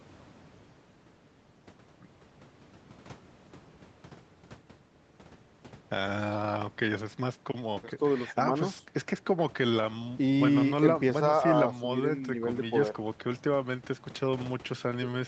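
Nothing stood out on listening to this speech recording.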